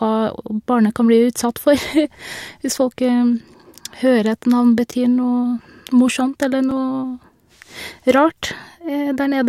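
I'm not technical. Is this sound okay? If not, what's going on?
No. You can hear two tiny ticks in the speech, at about 4.92 and 6.71 seconds. Each is a block of digital silence: the sound drops to complete silence for 10 and 5 milliseconds, then snaps back, most likely because the playback program didn't supply audio in time.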